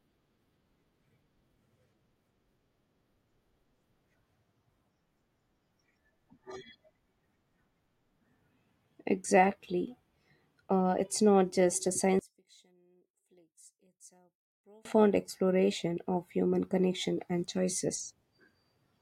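From 12.19 s to 14.85 s the speech drops by about 33 dB to a faint remnant, then returns at full level. The likely cause is one channel inverted: with one stereo side in reversed polarity, the centred voice cancels in a mono sum, leaving only the small difference between channels. What separates this from a dropout or mute is that a faint trace persists rather than true silence.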